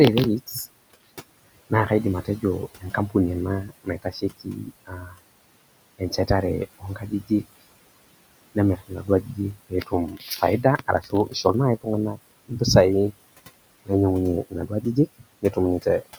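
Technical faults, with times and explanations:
Throughout, noise suppressor artifacts: the room noise, sitting about 19 dB below the speech, is pulled down by about 20 dB in pauses and returns under speech. On a spectrogram, the noise floor darkens between phrases and shows speckled, blotchy patches that flicker frame to frame.
0.47–1.04 s, 2.25–3.15 s (just after "naa kaidim"), 3.68–5.2 s, 5.99–7.61 s, 8.55–12.61 s, 14.5–16.19 s, speech cut by the noise suppressor: the suppressor mistakes soft speech for noise and drops it by about 14 to 21 dB, so consonants and endings sound swallowed. The losses run from a fraction of a second to around a second in the longest stretch. On the waveform and spectrogram, these show as sudden dips and missing high-frequency consonant energy.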